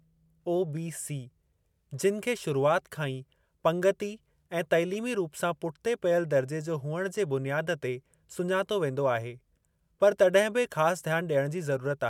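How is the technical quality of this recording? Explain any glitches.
The recording is technically sound, with no glitches or faults audible anywhere in the signal.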